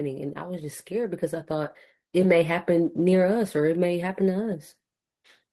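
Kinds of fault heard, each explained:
Automatic gain rising: the gain control judged the input too quiet and lifted its level steadily by about 10 dB from 0.38 s to 4.58 s, so the speech and the background noise swell together. Because the noise rises too and the climb is slow, it reads as gain change, not a speaker moving closer.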